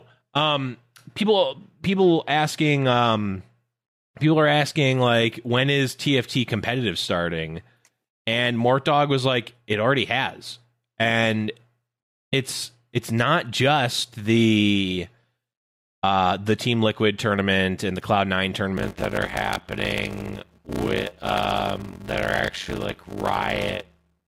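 A block size mismatch (padded) sets in at 18.77 s and lasts to the end of this speech recording. Each incoming block falls short of the stage reading it, which fits a 512-sample read, and the remainder is zero-filled. That leaves a 93.8 Hz buzz and speech running at 0.625 times normal speed with pitch roughly unchanged.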